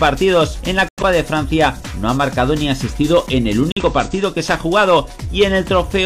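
At 0.89 s the sound drops out abruptly into silence. It returns at 1.03 s, about 0.14 s later. A second gap runs from 3.72 s to 3.83 s, about 0.11 s. Both are a corrupt frame muted. Damaged compressed frames failed to decode, and the player filled their slots with silence. Each gap's length fits two lost frames. The cut-in is sudden, not faded. Timing stays intact, so the sound resumes on schedule.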